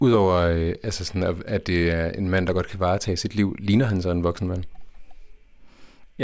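No technical faults can be heard at any point in the speech, so there are none to describe in time order.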